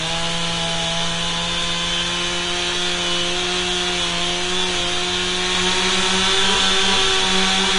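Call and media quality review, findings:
Grainy, hissy treble right through, attacks smeared, nothing above 10.5 kHz. Likely Vorbis compression at a low setting, around 35 kbps by the sound: the coarsely quantised residue turns fine high detail into noise.

Doubled audio track from 5.55 s to the end. A second full-band copy about as loud, trailing roughly 0.4 s, no decay or room colour, cutting in abruptly. Likely a slower second capture path or an out-of-step edit.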